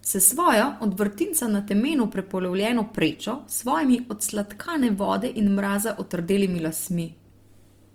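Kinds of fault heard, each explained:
Opus compression: An Opus encoder in music mode likely filled bit-starved bands with noise, making the speech plainly grainy and rough, consistent with about 24 kbps.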